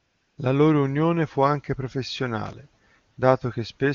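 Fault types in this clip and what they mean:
AMR comfort noise: the phone judged the line silent and stopped sending speech frames, so the receiver filled 0.00 to 0.37 s and 3.11 to 3.17 s with smooth synthetic noise. Unlike a dropout or noise gate, these gaps hold steady hiss, not silence.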